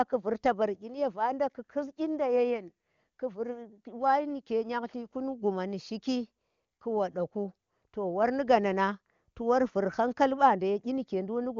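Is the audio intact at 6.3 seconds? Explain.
Yes, the speech at 6.3 seconds is intact, with no fault at that moment, and the AMR wideband (HD Voice) codec running at 23.85 kbit/s leaves at most faint coding traces there.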